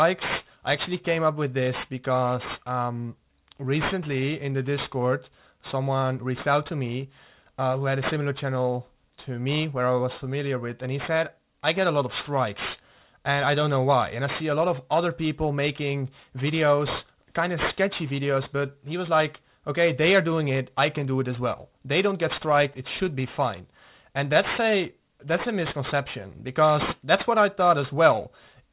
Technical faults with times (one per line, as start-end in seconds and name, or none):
0.00-28.73 aliasing